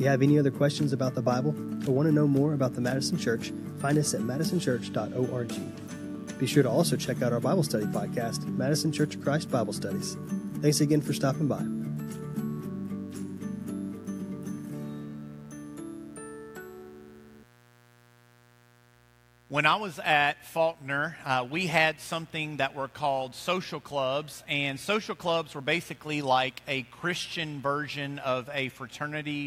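Mains buzz runs through the whole recording: switching spikes from a dimmer, rectifier or unshielded lead leak in twice per 60 Hz cycle, spraying harmonics up into the kilohertz range. The result is a steady, raspy buzz sitting roughly 30 dB below the sound.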